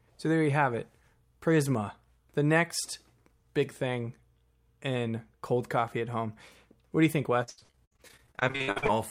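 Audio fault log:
7.43–8.90 s, repeated packet loss (robotic sound), after "do you think": packets kept dropping, gaps up to 79 ms were filled by extending prior audio, so nearly half sounds choppy and robotic.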